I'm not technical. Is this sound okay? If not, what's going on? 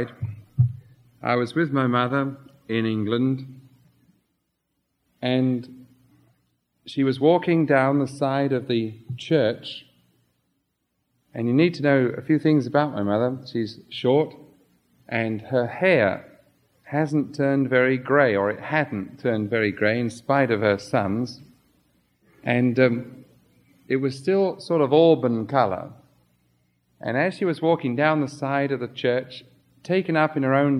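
Yes, nothing here points to a technical fault; it's fine as is.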